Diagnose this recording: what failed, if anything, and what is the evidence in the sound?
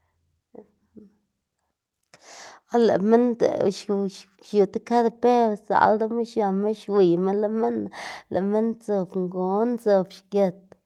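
Nothing failed; the call path behaves as expected.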